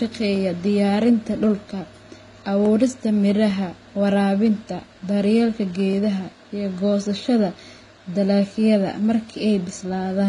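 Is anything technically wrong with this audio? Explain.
Yes, two faults. Throughout the speech, the signal appears to have been encoded by one lossy codec and then re-encoded by another. This is likely transcoding between lossy codecs, probably a low-rate Vorbis stage followed by HE-AAC at a similarly low rate. The second encoder spends its limited bits reproducing the first one's errors while adding its own, so two kinds of smearing and swirl sit on top of each other. Nothing is left above 11.1 kHz, which dulls consonants throughout.

At 2.66 s a single sharp click cuts through the speech, showing as a thin vertical line across the spectrum. The likely cause is dropped samples. Somewhere under half a millisecond of the stream went missing, so the waveform jumps straight from one value to a later one. The gap is far too short to remove any audible sound, but the instant discontinuity in the waveform produces the click.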